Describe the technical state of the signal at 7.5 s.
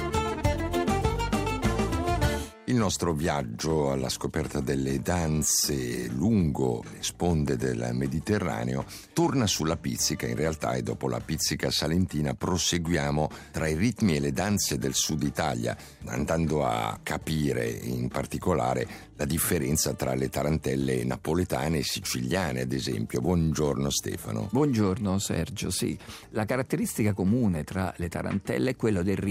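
A single sharp pop lands on the audio from 7.48 to 7.50 s, a brief click-like thump peaking roughly 10 dB above the surrounding signal, with the sound carrying on uninterrupted beneath it. This loud pop is likely a sudden voltage step or spike entering the chain, such as a switch, a connector being disturbed, a static discharge or a driver glitch, which the following circuitry smears into a short, hard transient.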